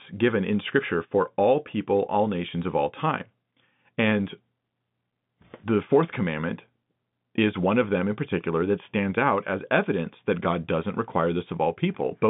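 Nothing in this speech recording points to a technical fault. It has the sound of an ordinary G.711 telephone line, with the band running from about 150 Hz to 3.6 kHz and nothing heard above 3.8 kHz.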